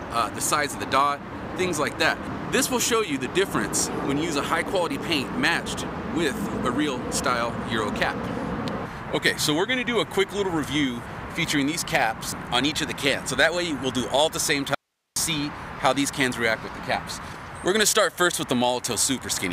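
Just past 14.7 s there's an audio dropout to a faint residue: from 14.75 to 15.16 s, roughly 0.42 s, the sound cuts out abruptly, leaving only hiss about 55 dB below the signal. That's likely a brief loss upstream while the rest of the chain stayed live.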